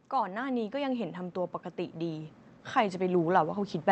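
From 0.1 to 1.24 s, then again from 1.75 s to the end, automatic gain rising swells speech and background together by about 6 dB in the first rise, visible as a steadily widening waveform envelope.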